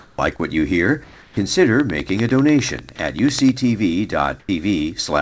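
Sound dropped by the voice detector appears twice. From 0.00 to 0.18 s, about 80 ms of real sound is missing and steady hiss fills its place. The same happens from 4.40 to 4.49 s, where about 40 ms is lost. The likely cause is a sender voice detector that judged the material as background, stopped transmitting, and left the receiver to synthesise filler until the detector fired again. On a waveform the sound's envelope is replaced by a flat, even band of noise. On a spectrogram the harmonic detail vanishes into a smooth, uniform wash.

Comfort noise replaces the background between 1.04 and 1.37 s. The real background, sitting about 27 dB below the loudest passages, gives way for 330 ms to a featureless hiss about 2 dB quieter. This is likely discontinuous transmission: the sender went quiet and the receiver generated noise roughly matched to the background's spectrum. A spectrogram shows the textured background turning into a smooth, slightly dimmer block with no fine structure. 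The waveform shows a small drop to a very even noise floor.

Right at the end of that stretch, from 1.35 to 1.37 s, the onset is clipped by the voice detector. The first 20 ms of the returning sound were never sent, so it starts abruptly without its soft attack. This is likely a detector that was slow to notice the restart. The waveform jumps from the comfort-noise floor straight into the sound, and the spectrogram shows a hard vertical edge instead of a gradual rise.

A train of clicks runs from 1.80 to 3.50 s, with about twenty near-identical pulses at a regular 10.1 per second. They are heard as steady ticking over the sound and its gaps, peaking roughly 15 dB above it. This is likely interference from nearby equipment or a faulty connection. On a waveform they appear as evenly spaced sharp spikes. On a spectrogram they form thin, full-height vertical lines at fixed intervals.

Throughout, nothing reaches above 8 kHz, which fits the G.722 call codec at 64 kbps that the audio passed through.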